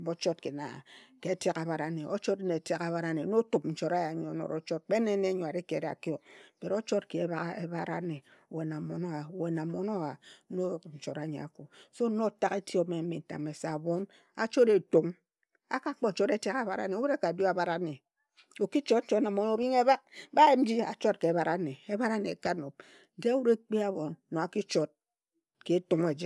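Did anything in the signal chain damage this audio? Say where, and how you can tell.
No, nothing in the signal chain has audibly damaged this speech recording. I can't place any point in the chain where the audio has been harmed, so there is no stage to name.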